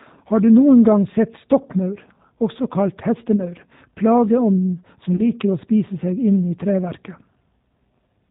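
Speech runs through the G.729 codec for its whole length, and the damage is plainly audible: the band stops near 4 kHz, and the voice has the slightly rough, synthetic quality of a coder that rebuilds it from a vocal tract filter, a pitch predictor and sparse pulses, which fits an 8 kbit/s G.729A stream. VoIP packet loss concealed by the speech codec occurs at 3.36 to 3.44 s, right after "også kalt", and again at 5.17 to 5.21 s. Each dropout fits roughly 20 ms of missing audio, two 10 ms frames, which the decoder filled by extending its last pitch and filter at falling gain. Because each frame builds on the previous one, the voice stays weak or distorted for a short while after packets return.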